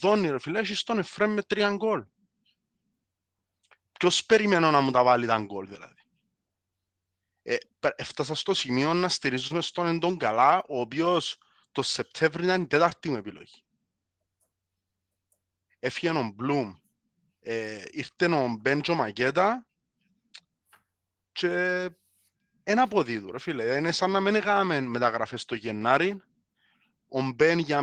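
At 9.47 to 9.55 s, just after "έφτασα στο σημείο να", and at 12.90 to 12.93 s, between "ήταν η" and "μου επιλογή", the speech briefly smears and wobbles. This is short concealed packet loss: about 20 ms of audio arrived too late, and the receiver extended the preceding sound before blending back.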